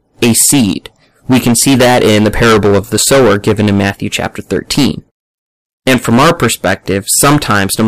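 From start to finish, the speech is hard clipped. The signal was driven about 20 dB beyond what one stage could pass. Every peak above that limit is cut flat, and roughly a seventh of all samples sit on the ceiling. Those squared-off tops add harmonics high into the spectrum. The result is not occasional crackle. A harsh, gritty fuzz rides on every loud syllable, and the louder passages sound buzzy.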